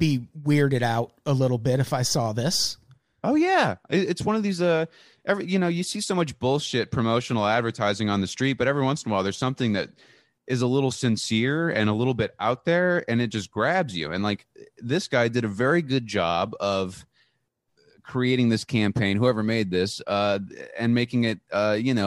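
Listening to the speech in this recording, nothing stood out as a technical fault at any point.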